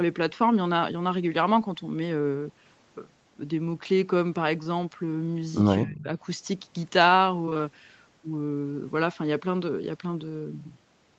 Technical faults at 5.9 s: speech suppressed in double talk

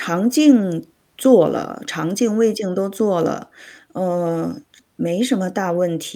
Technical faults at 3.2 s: none

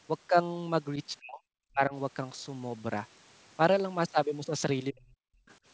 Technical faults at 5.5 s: other side's voice leaking through

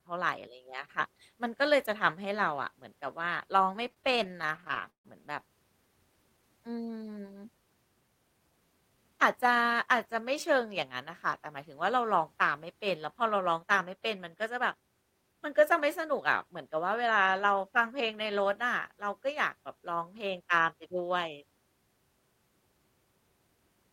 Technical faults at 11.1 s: none

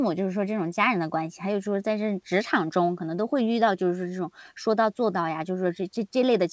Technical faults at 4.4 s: none

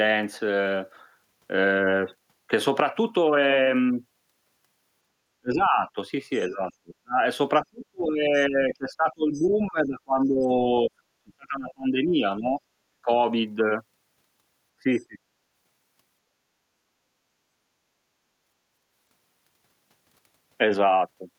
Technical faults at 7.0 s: speech suppressed in double talk

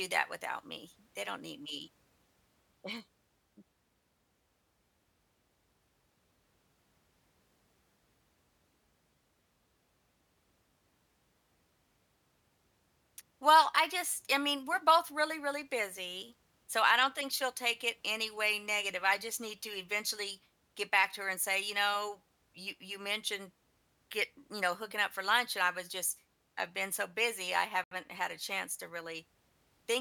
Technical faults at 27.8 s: Bluetooth stall

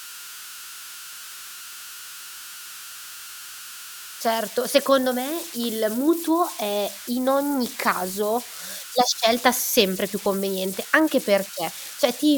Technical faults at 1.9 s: converter idle tones

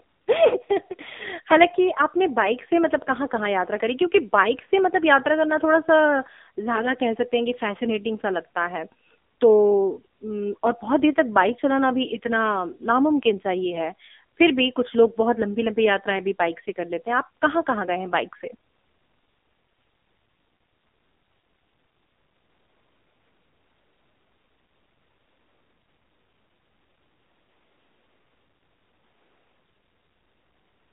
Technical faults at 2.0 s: AMR narrowband mobile codec

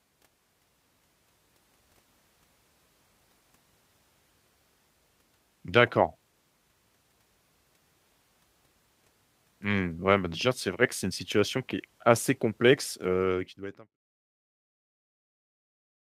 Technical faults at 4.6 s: none

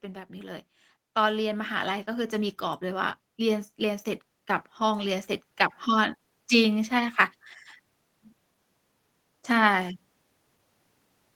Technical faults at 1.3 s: automatic gain rising

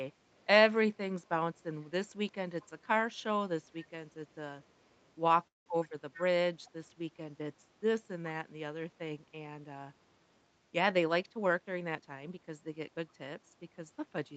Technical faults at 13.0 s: none

